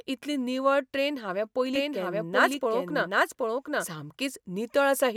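Doubled audio track, 1.75 to 3.85 s: an equally loud, dry copy trails about 0.7 s behind, likely from a slower second capture path.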